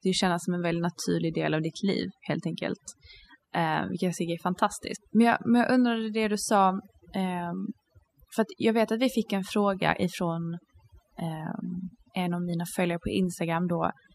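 Throughout the speech, overdone noise removal is at work. A noise reduction stage was pushed too hard. It cuts individual frequency bands deep whenever they sit near the noise level. Quiet voice detail goes too. The background drops and breaks up into twinkling specks.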